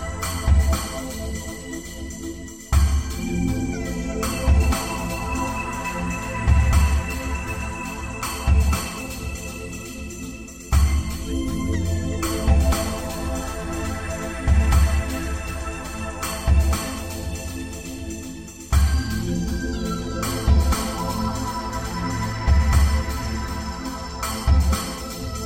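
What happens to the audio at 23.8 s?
Nothing goes wrong at 23.8 s; the audio carries on intact through that moment with no audible fault.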